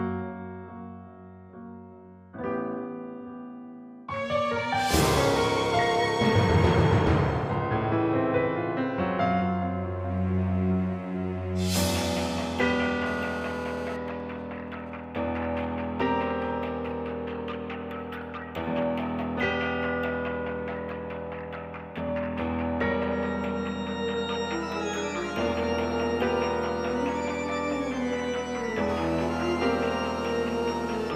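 A GSM phone in a call nearby is transmitting its 217-per-second radio bursts, which the audio circuit rectifies. From 13.06 to 13.97 s, and again from 28.89 to 31.11 s, this produces GSM phone buzz, a hard, raspy 217 Hz tone full of harmonics, unrelated to the audio, at about 13 dB and about 14 dB below the signal. Between 14.08 and 15.65 s, while the caller is silent, the same phone sends only sparse groups of bursts. These GSM signalling bursts come through as even ticks with a longer 217 Hz buzz twice a second, roughly 30 dB below the signal.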